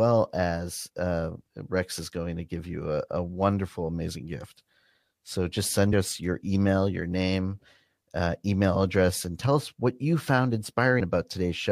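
At 5.92 s and again at 10.99 s, compressed frames are skipped: the speech jumps ahead roughly a tenth of a second, then slightly less.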